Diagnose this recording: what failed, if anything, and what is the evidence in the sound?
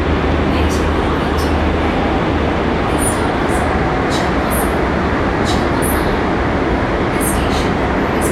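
Nothing stood out on listening to these everyday sounds; no stage of the chain left anything audible that would point to a failure.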